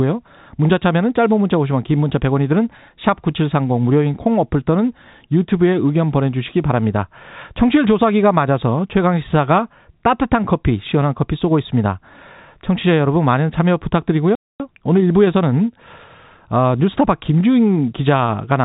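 At 14.35 s the speech just drops out, silent for about a quarter of a second until 14.60 s. That's a playback stall, and the likely cause is the player running dry or its thread getting held up, so output simply stopped until it caught back up.

Right after, from 14.60 to 16.24 s, there's time-compressed catch-up: the player trims its backlog by snipping and cross-fading tiny pieces, running about 1.15 times fast. The pitch holds, but the telephone-band speech, capped near 3.8 kHz, sounds hurried.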